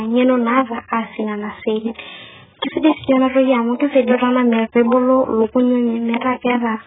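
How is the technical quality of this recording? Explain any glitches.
Quality is poor throughout because of heavy codec damage. AAC compression, throughout: the speech likely passed through a very low-bitrate AAC-LC encoder, around 8 kbps, which removed everything above 3.8 kHz, so it sounds dull, smeared and warbling.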